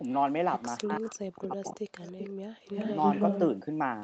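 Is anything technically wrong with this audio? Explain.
Yes, there are two faults.

Echo leak is audible at 0.08–0.31 s, 0.58–0.63 s, 0.95–1.18 s, 1.43–1.48 s, 2.02–2.3 s and 2.65–3.4 s. A copy of speech returns about 319 ms late, likely because a far-end echo canceller let loudspeaker pickup through. It starts barely audible and grows until the last stretch matches the main speech in level.

Speech suppressed in double talk occurs between 0.82 and 1.88 s, overlapping the echo at 0.95 s and 1.43 s. The canceller, likely unable to separate local talk from echo, pulls both down. The speech dips in pieces, around 0.7 s in total, with the deepest drops roughly 40 dB.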